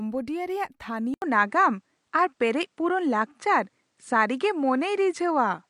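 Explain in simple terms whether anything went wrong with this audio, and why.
At 1.14 s the speech cuts out for 80 ms, then stays duller to the end, with nothing above 10.5 kHz and a shifted level, likely because the input switched to a poorer device.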